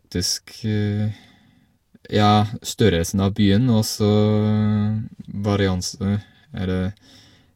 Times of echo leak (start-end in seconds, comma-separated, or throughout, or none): none